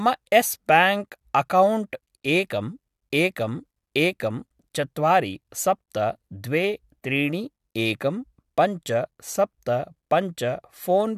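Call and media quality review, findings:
No audible faults in the speech path; the signal holds steady with no dropouts, level jumps or timing disturbances.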